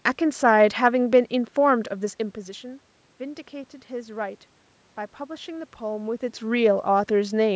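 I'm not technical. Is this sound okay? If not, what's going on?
Yes, this sound is okay.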